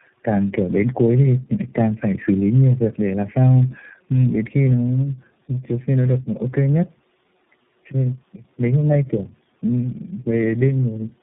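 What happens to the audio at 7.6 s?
At 7.6 s the speech shows tandem speech coding, present for the whole clip rather than just this moment. It sounds like the signal was decoded and re-encoded by several low-rate speech codecs in series, each compounding the last one's errors. The result is rough, muffled, warbly speech with nothing above 3.8 kHz.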